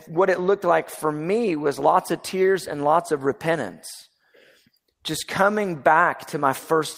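At 1.79 s, a lost packet rebuilt from error correction: a low-bitrate copy fills 20 ms, sounding rougher and noisier, a brief smeared patch on the spectrogram, with no gap in the waveform.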